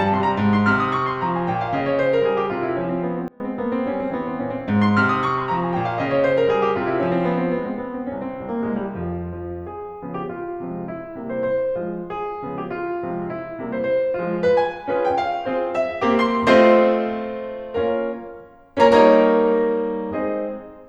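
Between 3.28 and 3.4 s the music shows a sudden gain jump, most likely a digital gain setting applied from one sample to the next with no ramp to smooth it. Within that span the level falls by about 24 dB in one step, so the music abruptly drops to a much quieter level, and the background noise falls with it, until the level returns at 3.4 s.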